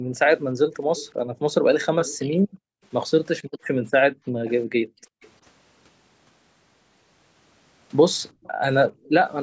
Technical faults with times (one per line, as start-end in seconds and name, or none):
0.00-0.14 background gated by the echo canceller
0.15-2.18 echo leak
1.25-5.22 background gated by the echo canceller
4.45-5.30 echo leak
8.32-9.05 background gated by the echo canceller
8.44-9.29 echo leak